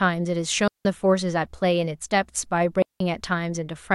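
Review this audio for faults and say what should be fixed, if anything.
A digital wireless dropout happens twice: the receiver loses too much of the link's data and mutes, leaving clean holes of near silence at 0.68–0.85 s and 2.82–3.00 s, each about 180 ms, with no noise burst around them. Keeping transmitter and receiver in clear line of sight, within range and away from interference would prevent it.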